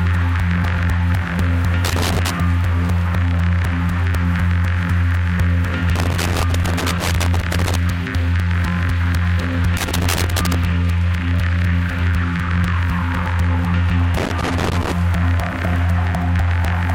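A recording of everyday sounds, broken by loose connector crackle in four bursts. They run from 1.84 to 2.30 s, 5.96 to 7.76 s, 9.77 to 10.55 s and 14.17 to 14.92 s. A worn or dirty contact keeps making and breaking, so the signal is chopped into irregular scratchy crackle.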